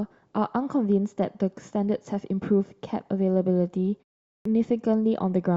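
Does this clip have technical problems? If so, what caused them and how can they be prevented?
Yes. A clipped start after a pause occurs at 4.35 s. After about 0.4 s of silence, the output device had gone idle and needed time to wake, so the first 104 ms of the next word, up to 4.45 s, was lost. On a waveform, speech leaps straight out of flat silence with no rising onset; a spectrogram shows a hard vertical edge. Keeping the output stream active through pauses prevents this.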